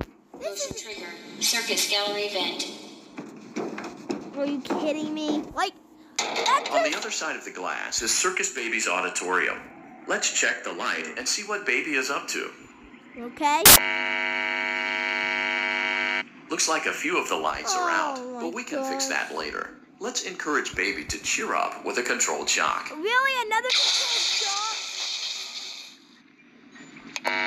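Around 13.66 to 13.76 s there's a short burst, roughly a tenth of a second, where the audio turns into loud, harsh noise. That's samples built from the wrong bytes: for that stretch the reader is assembling each sample from mismatched bytes, maybe one byte off or with the order swapped, so the jittery low bits end up dominating every value. What you get is harsh broadband noise in place of the sound until things realign.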